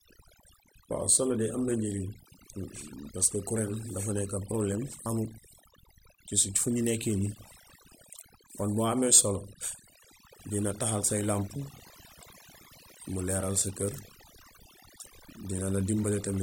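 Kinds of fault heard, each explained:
Overdone noise removal: a noise reduction process pushed too hard throughout the clip mutes individual frequency bands whenever they sit near its noise estimate, so the background drops and breaks up into twinkling specks and softer parts of the speech vanish.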